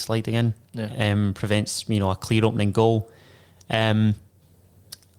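No technical faults are audible.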